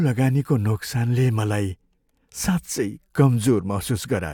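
A speech recording with nothing technically wrong with it.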